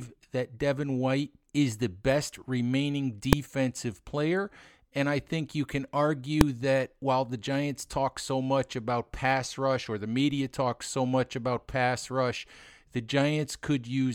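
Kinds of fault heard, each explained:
Invalid numbers at full scale: A calculation broke down and produced infinite or invalid values, which were forced to the extreme sample value. Each block lasts only about 1.45 ms, consistent with a 64-sample block. So each is heard as one sharp bang, at 3.33 s and 6.41 s.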